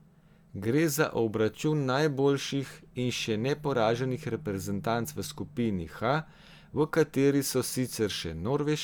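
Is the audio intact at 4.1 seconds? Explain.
Yes, at 4.1 seconds the speech plays through intact, with no dropout, click, distortion or other fault at that point.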